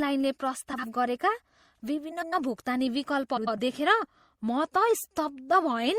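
Speech with plainly audible MP3 compression throughout: watery, swirly treble and smeared consonant attacks, likely from encoding at around 64 kbps. Frames out of order at 0.73–0.84 s, 2.11–2.33 s and 3.37–3.59 s swap two adjacent blocks, roughly 52 ms, then 105 ms each, giving a garbled flutter.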